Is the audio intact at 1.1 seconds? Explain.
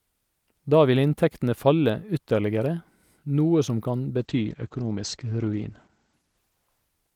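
Yes, the speech at 1.1 seconds plays through cleanly, with no dropout, click, distortion or other fault at that moment.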